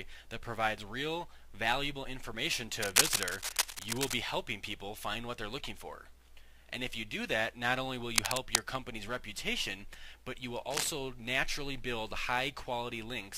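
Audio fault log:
2.82–4.14 s, 8.16–8.60 s, 10.70–10.88 s: cable scratch noise. Dense, ragged crackle sits over the sound, a little louder than it in the first two bursts and about level in the last, likely from a worn connector or cable being moved. It appears as broadband speckled smears on a spectrogram and jagged spikes on the waveform.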